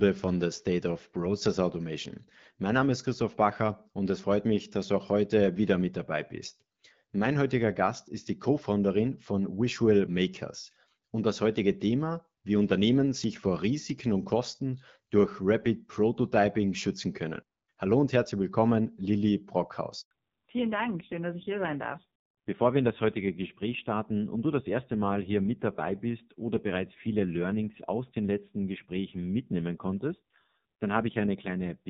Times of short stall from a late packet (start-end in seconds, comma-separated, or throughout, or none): none